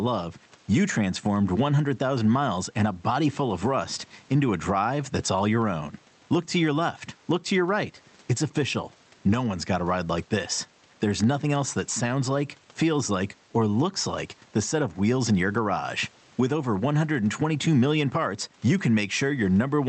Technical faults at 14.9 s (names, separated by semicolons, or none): gain pumping